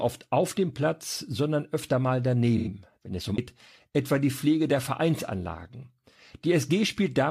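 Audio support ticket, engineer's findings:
Speech dropout at 2.57–2.68 s, about 85 ms, just before "wenn es um". AAC frame loss with concealment in the decoder: the length fits roughly two lost frames, patched from the last good spectrum. Heard as a brief smeared, noisy, phasey patch. Spectrogram: harmonic striations blur into a static, noise-like smear across the band. Waveform: periodic structure breaks up into a noisy segment for that span.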